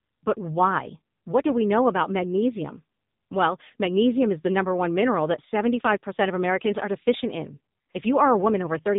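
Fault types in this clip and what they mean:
AMR narrowband mobile codec: throughout, the speech is rebuilt by the 2G/3G phone codec's vocal-tract model, cut off above 3.8 kHz and heavily buzzy and synthetic, which fits a low mode near 6.7 kbps; a plain low-pass filter would dull it without that buzz.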